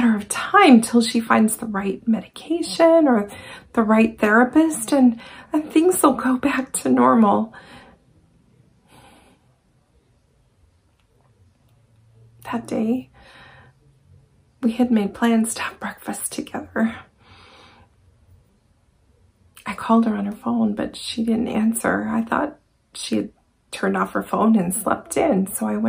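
At 1.27 s, fresh audio failed to reach the output device in time, so it played its previous block once more, a repeated buffer. The doubled piece lasts about 5.3 ms, which fits a 256-sample buffer, and it sounds twice in a row with an abrupt seam at the repeat. Because the block is so short, the fault comes across as a click or brief buzz rather than an audible stutter.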